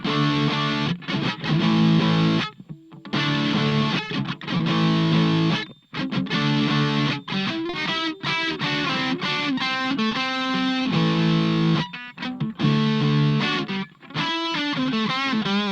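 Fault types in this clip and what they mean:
Short concealed packet loss: six 20 ms holes and one 40 ms hole, filled by extending the preceding sound, so they smear or wobble rather than going silent.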